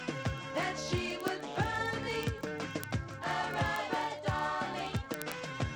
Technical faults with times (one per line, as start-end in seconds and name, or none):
0.10-5.74 word clock ticks